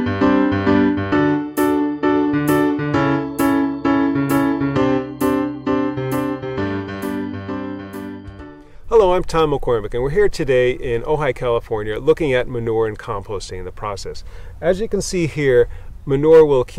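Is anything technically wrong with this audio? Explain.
No, nothing technically wrong can be heard in this audio.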